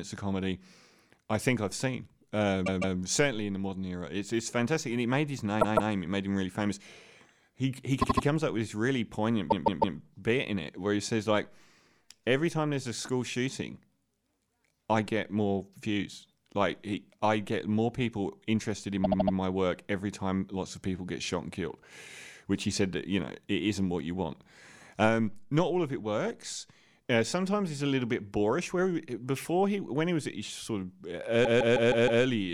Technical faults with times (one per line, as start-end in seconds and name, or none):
2.65-2.97 repeated frames
5.60-5.92 repeated frames
8.01-8.24 repeated frames
9.50-9.97 repeated frames
19.03-19.35 repeated frames
31.44-32.22 repeated frames